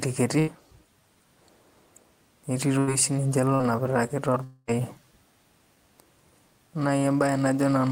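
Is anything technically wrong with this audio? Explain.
Yes. The speech has four gaps where audio failed to arrive in time and the receiver covered the hole.

A burst of packet loss hits at 0.39 s and again at 2.79 s. Each time about 80 ms of audio is missing. The receiver carries the last sound forward for roughly that long and lowers its level as the gap runs on. Voiced sound turns into a brief held buzz and other sound into a fading hiss. The speech then picks up again further on, with that stretch gone.

At 3.55 s there is a short concealed packet loss. About 40 ms never reached the decoder. The receiver extends the preceding sound, following its pitch if voiced or shaping noise if not, then blends back into real audio. The result is a quick smear or wobble lasting a few hundredths of a second, and a brief consonant may simply drop out.

From 4.44 s to 4.70 s the gap is longer, about 240 ms. 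Its cause is likely a network dropout. The receiver fills almost the whole gap by continuing the last sound, which fades as a buzz or hiss instead of falling to silence. The speech returns after that, with a quarter-second of content missing.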